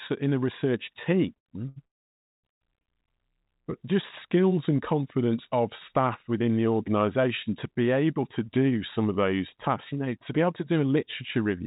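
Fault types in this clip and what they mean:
Short stall from a late packet: A packet arrived late and the last sound was stretched to cover it. This happens four times near 1.3 to 2.9 s, each a brief hold.
Call audio freeze: A gap of about 0.6 s, nearly all silent, opens near 1.9 s. It is likely from delayed packets, and the audio resumes without loss.
Jitter buffer speed-up: After "the organization to be", the receiver trims short pitch-period pieces, so the speech runs about 7% faster at the same pitch, dropping roughly a third of a second.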